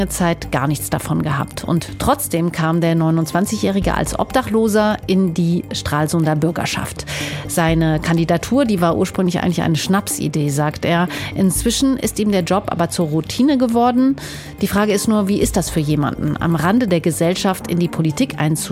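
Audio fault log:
14.28–18.65 s, periodic USB or driver dropouts: regular ticks every 0.125 s, about forty in all, heard wherever signal is present. A recurring stall on the USB bus or audio driver skips a tiny sliver of audio each time, making the waveform jump.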